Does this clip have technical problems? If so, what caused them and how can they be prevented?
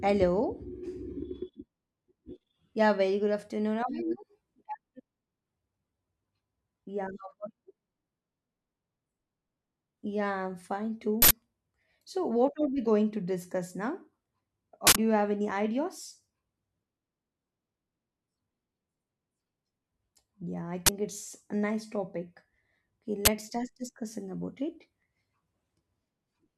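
Yes. Uninitialised buffers cause loud bursts of digital noise at 11.22–11.31 s and 14.87–14.96 s, about 85 ms each (fitting 4096-sample blocks), and at 20.86–20.89 s and 23.25–23.28 s, about 21 ms each (fitting 1024-sample blocks). Each burst is a block that played before audio was written to it, so leftover memory came out as samples. Zero every buffer on allocation and queue it for playback only after it has been filled.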